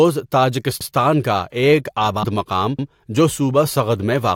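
A broken MP3 bit reservoir, likely, at 2.22 to 2.25 s: between "کا ایک" and "مقام جو" a brief glitch replaces one frame's audio, which fits a 24 ms frame whose data was lost. Overlapping chunks at 2.79 to 2.89 s: a new chunk began 100 ms early, so that piece plays twice and clicks or stutters at a join of 2 s chunks.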